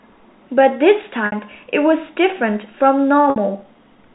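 At 1.26 s and again at 3.30 s the speech briefly holds on a buzzy, slightly frozen tone for about 60 ms before carrying on. Both are packet loss with pitch repetition: a stretch of audio the length of roughly two packets went missing, and the receiver filled each gap by looping the last pitch period and fading it. The G.711 telephone band stays intact through both repairs.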